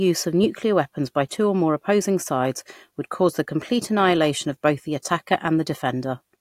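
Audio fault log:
5.02–5.05 s pre-echo: after "annihilation of both the", block codec noise hisses 28 ms before an attack, a broadband smear preceding the spectrogram onset.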